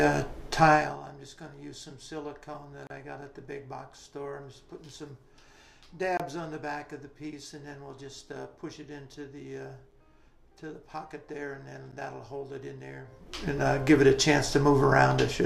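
Four blocks of digital silence: around 2.87–2.90 s (32 ms), 6.17–6.20 s (25 ms), 9.91 s and 11.92 s, each a hard dropout, likely where buffers weren't filled in time, the last fitting a 512-sample buffer.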